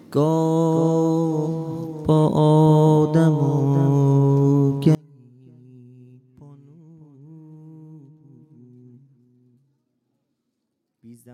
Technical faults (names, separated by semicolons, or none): one channel inverted